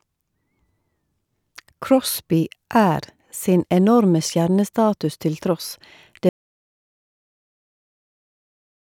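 At 6.29 s the speech cuts off abruptly and the rest of the clip, about the last 2.5 seconds, is dead digital silence, with no room tone or hiss underneath. This is an audio dropout to silence: the input signal stopped reaching the recorder, likely through a disconnected device, a failed link or an accidental mute, while recording carried on writing silence. Whatever was said after that point is lost.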